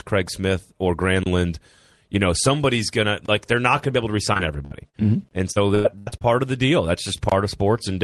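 A gap between chunks opens at 1.23 to 1.26 s and again at 3.26 to 3.28 s. Each is a 25 ms hole, recurring every 2 s, where silence is left between chunks. From 4.33 to 4.95 s, repeated packet loss gives a choppy, robotic sound. Four holes, the longest 59 ms, are patched by stretching the previous sound. The next chunk gap follows at 5.29 to 5.31 s. A heavier burst of packet loss runs from 5.51 to 6.26 s. Six holes, up to 98 ms, make about 39 percent of that stretch concealed. A final chunk gap sits at 7.29 to 7.32 s.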